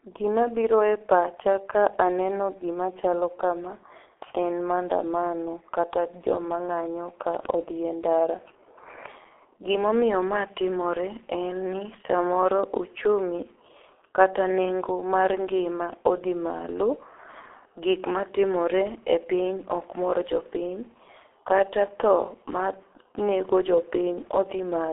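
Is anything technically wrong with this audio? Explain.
Yes, there's one problem. Throughout, the speech carries heavy G.723.1 codec damage: nothing above 3.7 kHz, slow-updating coarse voice modelling, so it's muffled and hoarse with smeared consonants, consistent with about 6 kbit/s.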